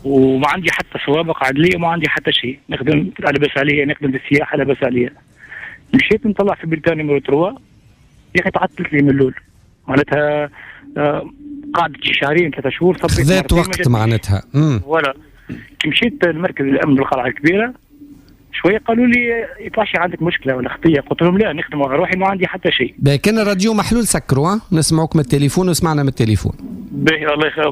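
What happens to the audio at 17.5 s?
Nothing goes wrong at 17.5 s; the audio plays through that moment intact.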